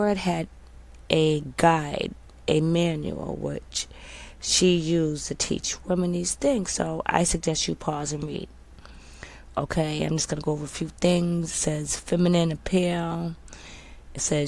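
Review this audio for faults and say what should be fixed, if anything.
Nothing here needs fixing; no faults can be heard.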